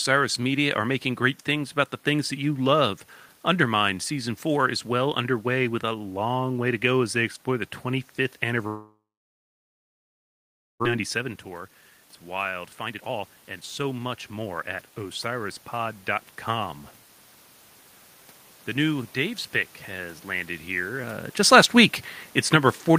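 From 8.67 to 10.86 s the sound thins into a fading buzz or hiss, then about 1.8 s of near-silence; this is likely a long network dropout, with roughly 1.6 s of audio lost. Next, from 10.94 to 11.98 s and again from 12.66 to 14.77 s, the speech runs hurried at unchanged pitch, about 10% then 19% fast. This is a jitter buffer speed-up trimming tiny pitch-period slices to shed the backlog, roughly a tenth of a second and then about 0.4 s.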